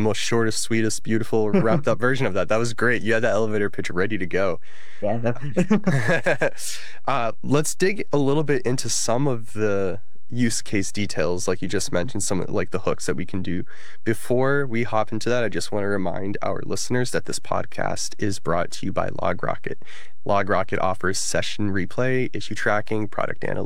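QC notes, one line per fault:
Throughout, DC offset: nothing is audible as such, since a constant shift carries no pitch, but the speech sits off-centre on the waveform and shows a steady block of energy at 0 Hz at the very bottom of the spectrum. The entire signal rides on a fixed level of about -22 dBFS, so peaks on one side reach full scale sooner, costing headroom and risking a click wherever the audio is cut or faded.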